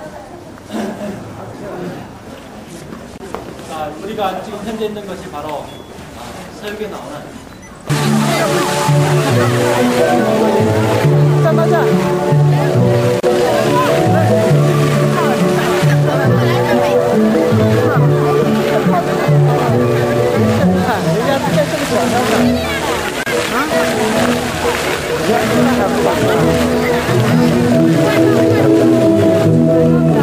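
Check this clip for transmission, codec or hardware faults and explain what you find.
Three brief dropouts, all one fault: a gap at a join of encoded pieces, at 3.18 s (about 25 ms), 13.2 s and 23.23 s (31 ms each), recurring every 10 s. Separately encoded segments were butted together with their encoder start delay and end padding left in, so the sound cuts to silence and resumes where it stopped. Waveform and spectrogram show thin vertical blank stripes with smeared edges.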